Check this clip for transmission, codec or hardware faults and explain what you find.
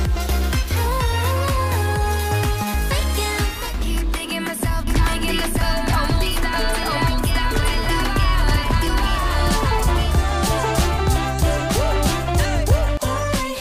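There's one fault: a doubled audio track from 4.87 s to 12.97 s. A full-band copy trails the original by about one second at roughly equal level, likely from a second, slower capture path, with no decay or room colour, and it starts and stops abruptly.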